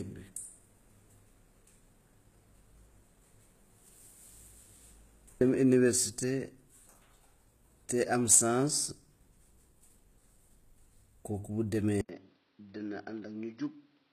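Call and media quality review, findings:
HE-AAC compression, throughout: treble gritty and metallic, nothing above 14.9 kHz. Likely spectral band replication rebuilding the highs from lower bands; damage fits roughly 20 kbps.

Input switched to a poorer device, 12.01 s to end: 80 ms gap, then band stops near 5.9 kHz, level about 10 dB lower, new faint noise floor. Likely capture moved to a narrower microphone path.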